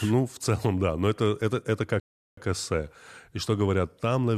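It's a short speech clip with a rebuffering stall: right after "но это это это", the audio drops to silence from about 2.00 s to 2.37 s, then picks up exactly where it left off. The player ran dry and waited for more data, so nothing's missing, but roughly 375 ms of dead air gets added.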